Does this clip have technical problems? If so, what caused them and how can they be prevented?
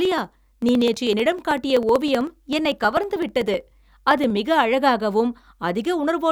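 Yes. Periodic USB or driver dropouts tick through the speech from 0.05 to 4.37 s, once every 63.5 ms, each skipping about half a millisecond of audio. A spectrogram shows evenly spaced thin vertical lines, and the waveform shows small discontinuities. Keep competing devices off that USB bus and use a larger driver buffer.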